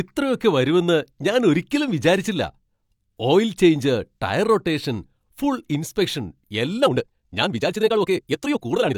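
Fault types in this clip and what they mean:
Time-stretched section: After "ടയർ റൊട്ടേഷൻ ഫുൾ ഇൻസ്പെക്ഷൻ", from 6.78 s to the end, the speech abruptly runs at twice its pace while its pitch stays where it was, sounding rushed. The likely cause is software compressing that stretch to fit a shorter length by dropping short pieces. Simply playing it back faster would have raised the pitch along with the pace; here only the timing changes.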